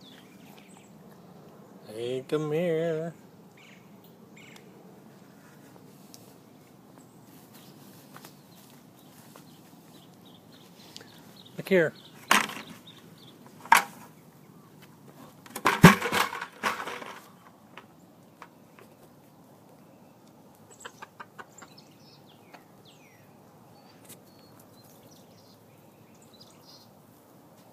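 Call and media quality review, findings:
No audible faults found on review; nothing to flag for follow-up.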